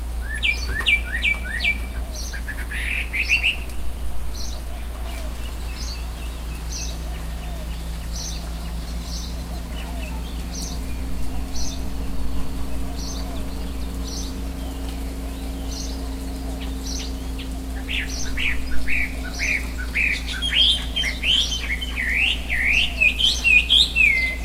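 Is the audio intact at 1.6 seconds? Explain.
Yes, the audio at 1.6 seconds is intact, with no dropout, click, distortion or other fault at that moment.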